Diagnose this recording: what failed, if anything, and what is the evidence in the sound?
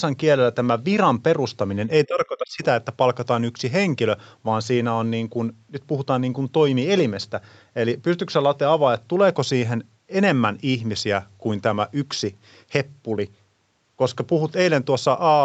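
Between 2.06 and 2.63 s the speech sinks, falling by about 25 dB at its deepest and staying affected for roughly half a second. This points to the call-processing stage, most likely speech suppressed in double talk. With both ends talking at once, the echo canceller could not tell the local talker from loudspeaker echo, so it attenuated both. The ceiling near 8 kHz comes from the Opus call path's bandwidth.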